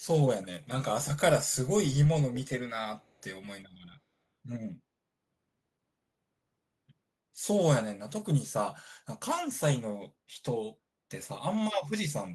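At 3.01 s, lasting until 3.12 s, a brief echo leak appears: a very faint copy of the speech returns about 0.3 s after the original, heard as a short scrap sitting far below the main signal. The likely cause is a far end playing the call through a loudspeaker, where the echo canceller failed to fully suppress what its microphone picked back up, so a residue was transmitted back down the line.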